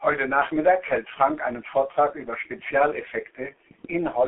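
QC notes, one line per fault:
Throughout, G.723.1 codec: the speech sounds muffled and hoarse, with nothing above about 3.8 kHz and the whole thing squeezed into a phone-line band of roughly 300 Hz to 3.4 kHz. Damage is heavy here. At around 6.3 kbit/s the codec chops the signal into 30 ms frames and only refreshes its model of the voice once per frame, so quick changes get smeared. That's why consonants blur together and the tone takes on that rough, buzzy edge.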